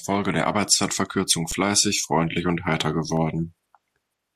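At 1.51 s, just before "freundlich und heiter", and again at 3.17 s, just after it, the speech hits an underrun with held sample. The output buffer ran dry and the converter froze its last value for about 9 ms and then under 1 ms. That flat stretch sits off zero, so unlike a dropout to silence it cuts in without a click. Roughly that much live audio was lost in each gap.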